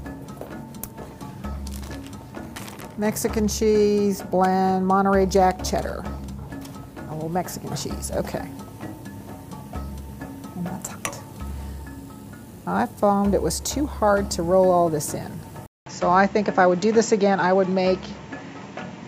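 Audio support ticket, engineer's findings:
At 15.66 s, a 200 ms gap, then audio turns dull to the end. Nothing above 7.6 kHz, faint new noise floor, level unchanged. Likely input switched to a poorer device.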